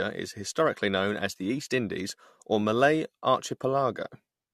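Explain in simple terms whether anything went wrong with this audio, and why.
The speech sounds swirly and hollow throughout, with blurred consonants, worse than one compression pass would cause: generation loss, likely from re-compressing it about four times.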